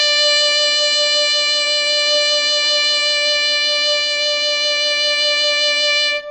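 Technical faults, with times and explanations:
Throughout, MP3 compression: the music has nothing above 8.4 kHz and a watery, swirling texture, likely from an MP3 encoder short of bits, which fits roughly 32 kbps. A spectrogram shows a hard ceiling at 8.4 kHz, with patchy holes flickering below it.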